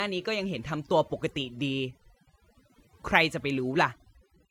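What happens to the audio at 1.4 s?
Overdone noise removal is at work at 1.4 s, and it runs through the whole clip rather than starting there. The noise reducer is set far too aggressively: any frequency band close to its noise estimate gets pushed down or switched off, and quieter components of the speech are removed along with the noise. The background collapses into near silence dotted with twinkling specks.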